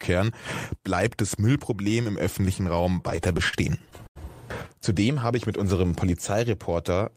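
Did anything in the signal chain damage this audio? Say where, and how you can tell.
Yes. At the network stage, packets arrived late and the jitter buffer emptied 13 times between 2.93 and 4.18 s. The receiver bridged each gap by extending the last sound, adding 243 ms, the longest gap 88 ms. These repeated stalls (stutter) drag the audio without losing any.

A jitter buffer slow-down follows at 5.0 to 5.28 s. Still short of reserve, the buffer repeated single pitch periods, adding 39 ms and running the audio at 89% speed. The sound stretches briefly while its pitch stays unchanged.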